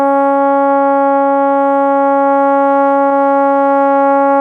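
Short concealed packet loss occurs at 3.09 to 3.13 s in this music clip. About 20 ms of audio failed to arrive at the decoder in time, so the receiver covered the gap by extending the sound that came just before it, then crossfaded back into the real signal once packets resumed. The result is a brief smear or small wobble in the music, where a fleeting detail in that instant can be lost.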